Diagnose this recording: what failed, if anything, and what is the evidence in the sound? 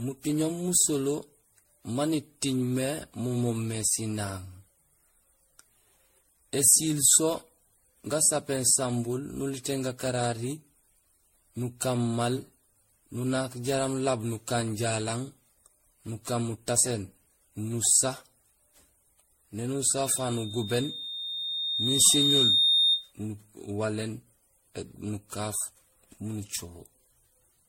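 The speech sounds swirly, smeared and hollow throughout, with blurred attacks and nothing above 16.5 kHz. This is generation loss at the codec stage, likely from repeated lossy coding. The degradation fits around fifteen passes through MP3 at 64 kbit/s. Each decode and re-encode quantises the signal again on a shifted frame grid, so noise and spectral holes pile up beyond what a single pass at that bitrate would leave.

From 19.98 s to 23.13 s a steady 3.7 kHz tone swells over roughly two seconds into a squeal that reaches about 5 dB above the speech. This is loudspeaker feedback squeal, a fault in the acoustic loop between playback and the microphone. The microphone picked up the speaker it was driving, and at 3.7 kHz the loop gain went above one. That single frequency kept growing on its own.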